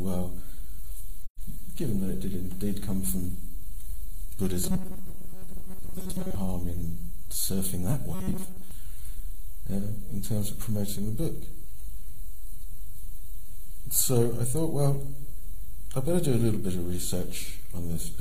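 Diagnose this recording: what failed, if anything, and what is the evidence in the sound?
AAC frame loss with muting, 1.26 to 1.40 s, at the codec stage: a soft-edged hole of about 128 ms, which fits three lost frames. The decoder zeroed their spectrum, and the overlapping windows fade the sound out and back in.

Robotic sound from repeated short buffers, 4.64 to 6.35 s and 8.15 to 8.71 s, at the driver or buffer stage: a rigid metallic buzz at 188 Hz. The likely cause is a starved buffer looping its last 5.3 ms or so while most of the real audio is skipped.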